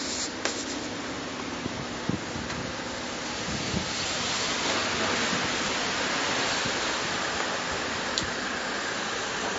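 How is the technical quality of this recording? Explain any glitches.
The quality takes a clear hit from what's most likely MP3 compression, running through the whole recording. The damage is plainly audible: the sound has a watery, swirly texture, and sharp attacks smear rather than snap. That fits a very low bitrate, around 30 kbps. With so few bits, the encoder drops quieter frequency lines, which then flicker on and off between frames. That flicker is what gives the audio its swirl.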